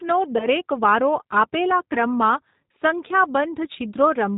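From the start to the end, the speech carries the plainly audible sound of a G.729 codec, which fits the 8 kbit/s G.729A variant. The voice is rebuilt from a vocal tract filter model, a pitch predictor and a handful of pulses per 10 ms frame, so it sounds rough and slightly synthetic. Nothing above 4 kHz survives, which leaves the sound band-limited and dull.

At 0.38 to 0.47 s and again at 1.93 to 1.98 s there is VoIP packet loss concealed by the speech codec. Each gap is 20 ms of missing audio, which points to a single lost packet. The decoder fills it by extending its last pitch and filter state at falling gain, so the sound smears into a brief fading buzz or coloured noise. Because every frame depends on the one before, the voice stays weak or distorted after the gap, until the later end times.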